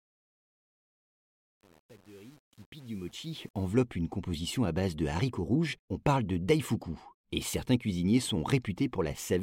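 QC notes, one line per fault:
0.00–3.68 s, truncation distortion on the fade-in: as the speech rises from silence at the start, the quiet early portion up to about 3.56 s sounds gritty instead of emerging cleanly. The fade stage rounds each sample to a coarse grid without dither, consistent with 8-bit resolution, so low-level waveforms collapse into a few square steps. The grit clears by "une composition à base".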